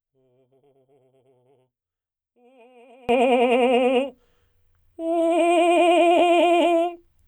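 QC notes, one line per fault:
0.00–3.09 s, one channel inverted: the music drops about 31 dB in mono, likely because one channel's polarity is reversed, so the shared centre content cancels.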